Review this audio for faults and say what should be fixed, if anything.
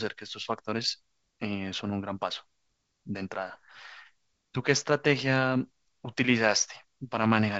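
Nothing needs fixing: the speech comes through G.722 wideband telephone coding at 64 kbit/s, with nothing above 7.8 kHz as that path intends, and no faults are audible.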